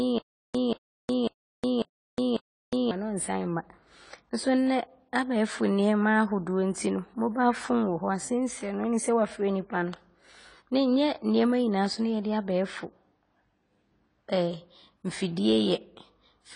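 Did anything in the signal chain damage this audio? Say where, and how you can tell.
Yes. The stutter with silent gaps runs from the very start to 2.91 s, with five repeats. A 0.18 s fragment plays, then about 0.36 s of digital silence, repeating every 0.55 s. This is likely a playback or streaming buffer stall replaying its last fragment, and the speech in those gaps is lost.

AAC compression damage is plainly audible throughout the speech, and nothing sounds above 10 kHz. The band-limited, smeared, warbling texture points to codec quantisation at a starved rate, consistent with AAC-LC at around 24 kbps.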